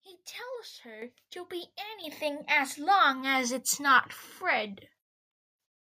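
At 1.02 s, just before "to be", the microphone volume is stepped up. The level jumps by about 9 dB in one step. The call software judged the input too quiet and raised the device gain. Voice and background rise together. At 2.04 s, between "to be" and "as long as it's", it steps up again, by about 7 dB. Each jump is abrupt, not a smooth ramp.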